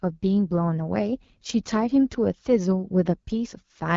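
AMR wideband (HD Voice) codec damage runs throughout the speech. The codec models the vocal tract with pulse excitation below 6.4 kHz and fills 6.4 to 7 kHz with shaped noise. Here it sounds plainly rough and raspy, which points to one of its lowest rates, around 8.85 kbit/s.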